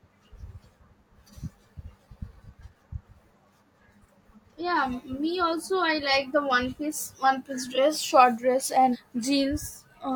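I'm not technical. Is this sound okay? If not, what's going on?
No. At 8.90 to 8.96 s there is a brief glitch caused by damaged data in a compressed stream: corrupted bytes made the decoder lose its place briefly.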